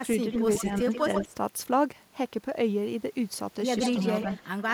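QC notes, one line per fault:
0.32–1.34 s, 3.77–4.05 s, 4.21–4.71 s, echo leak: a copy of the speech returns 137 ms late, roughly 10 dB down in the first stretch, about 5 dB down in the second, about 15 dB down in the third. Likely a far-end loudspeaker echo the canceller failed to remove. Spectrogram shows each harmonic pattern repeated, offset 137 ms.
0.64–0.86 s and 1.22–1.34 s, speech suppressed in double talk: while the echo overlaps, the speech dips by up to roughly 15 dB in short pieces, about 70 ms and 100 ms in total. Likely the canceller mistook speech for echo and attenuated both. Waveform shows brief envelope notches; spectrogram shows faded bands.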